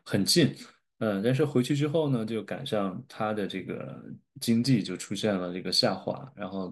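Nothing in this speech recording registers as a technical fault at any point.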